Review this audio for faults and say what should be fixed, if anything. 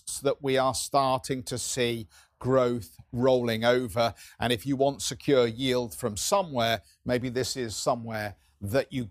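Nothing needs fixing; no faults can be heard here.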